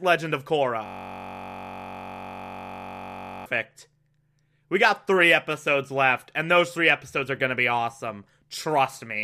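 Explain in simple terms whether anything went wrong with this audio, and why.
A system hang loop from 0.86 to 3.46 s: the computer froze and kept replaying one 21.33 ms scrap of audio, heard as a steady 47 Hz buzz.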